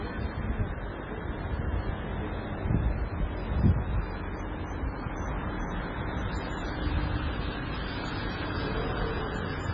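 From the start and through the whole clip the audio carries heavy damage of the kind MP3 compression leaves, likely from a very low bitrate encode at around 16 kbps. Starved of bits, the encoder discarded everything above 7.2 kHz, so the sound is dull, and weak frequency components flicker in and out between frames, giving a watery, swirling texture with smeared attacks. On a spectrogram this shows as a hard horizontal ceiling at 7.2 kHz and patchy, blocky energy below it.

From 0.09 s to about 9.6 s there are periodic USB or driver dropouts, one every 0.1 s, roughly a hundred in all. Each time, something stalled the audio path and a couple of milliseconds of signal were replaced by silence, heard as a steady ticking at 10 per second wherever sound is present. The waveform shows short flat gaps at regular intervals, and a spectrogram shows thin vertical lines evenly spaced across the clip.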